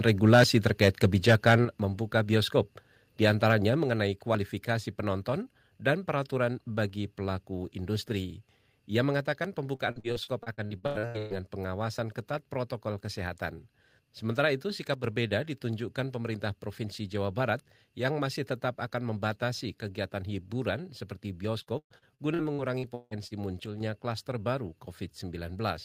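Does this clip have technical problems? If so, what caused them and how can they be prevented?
Yes, four kinds of fault can be heard.

Microphone overload: From 0.07 to 1.55 s the loudest syllables sound harsh and crackly, with flattened tops. The likely cause is input gain set about 6 dB too hot, so about 3 percent of the samples are cut off at the converter's ceiling. Set the input gain lower, leaving headroom below full scale.

Microphone volume stepped down: At 1.65 s, just before "membuka bioskop di antaranya", voice and background drop abruptly by about 6 dB. At 3.84 s, just before "kualifikasi penonton dan peraturan", they drop again by about 4 dB. Each drop is likely the call software's automatic gain control reacting to the clipping. Fix the input level beforehand so the software has no reason to adjust it.

Repeated packet loss (robotic sound): From 9.75 to 11.33 s the speech turns choppy, with 13 gaps. 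The longest is 120 ms, and about 42% of the stretch is patched by extending the preceding sound. From 21.62 to 23.34 s there are 9 more gaps, up to 164 ms, covering about a third of that span. Use a stable wired connection with enough bandwidth, or a larger jitter buffer.

One channel drops out: From 14.94 to 15.04 s, and from 23.66 to 23.80 s just before "klaster baru", the sound falls by about 6 dB. This is likely one stereo channel vanishing before the mono mix, which halves the shared content. Check the cable, connector and interface link for the affected channel.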